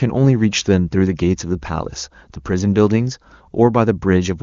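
No technical faults can be heard in this speech.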